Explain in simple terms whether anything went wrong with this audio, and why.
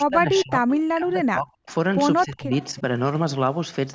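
Yes, two things went wrong. The first is speech suppressed in double talk. From the start to 1.65 seconds, the voice sinks until it almost vanishes. Around 2.24 to 2.77 seconds it dips again, more gently. The likely cause is both sides talking at once, so the call's echo canceller turned everything down.

The second is echo leak. Faint, delayed copies of the voice slip through at 0.37 to 0.43, 1.68 to 1.74, and 2.51 to 2.64 seconds. Each arrives 262 milliseconds late. A loudspeaker on one end was likely picked up by its microphone and sent back.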